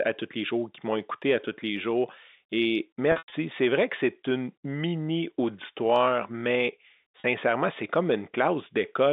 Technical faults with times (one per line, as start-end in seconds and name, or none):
3.12-3.32 packet loss with pitch repetition
7.20-7.24 packet loss with pitch repetition